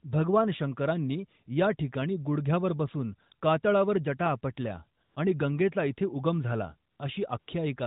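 AMR comfort noise appears at 5.04 to 5.16 s, between "कातळावर जटा आपटल्या" and "आणि गंगेचा इथे उगम", then at 6.92 to 7.00 s after "गंगेचा इथे उगम झाला", and at 7.40 to 7.48 s. Each time, speech frames stopped and the real background gave way to a smooth, steady synthetic hiss, unlike a dropout's dead silence.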